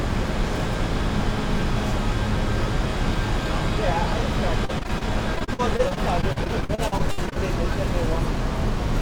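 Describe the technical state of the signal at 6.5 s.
At 6.5 s the signal sits inside a stretch of repeated packet loss (robotic sound) running from 4.65 to 7.38 s. There are 26 dropouts, the longest 61 ms, each patched by extending the preceding audio. Concealment fills about 23% of the span, making the sound choppy with pieces missing.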